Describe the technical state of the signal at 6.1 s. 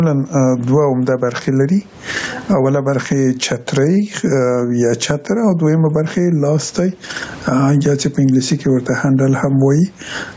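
At 6.1 s you're in the middle of gain pumping, which runs through the whole clip, with the level swinging by something like 20 dB. That's most likely the input gain set far too hot and a fast limiter or compressor yanking it back down on every peak, so the dynamics come out squashed.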